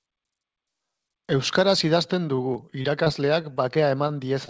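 From 2.36 s to the end at 4.49 s, the speech breaks up with repeated packet loss, giving a robotic sound. Eleven short holes, none longer than 24 ms, are patched by stretching the previous sound. About 9% of that span is concealed, so the speech turns choppy. Through the call path nothing sounds above 8 kHz, which fits a G.722 codec at 64 kbps.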